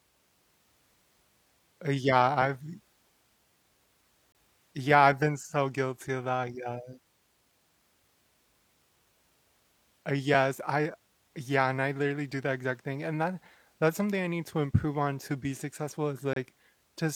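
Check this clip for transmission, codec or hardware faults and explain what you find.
The speech has one recurring transmission fault, a gap between stream segments, heard three times: from 4.32 to 4.35 s, at 10.34 s, and from 16.33 to 16.36 s. The holes are about 27 ms, 4 ms and 29 ms, spaced roughly 6 s apart, which points to 6-second segments whose timestamps don't quite join, so the player pads the gap with silence. Each is a hard-edged blank. Unlike a packet-loss dropout, nothing is skipped. The sound pauses and resumes intact, just slightly late.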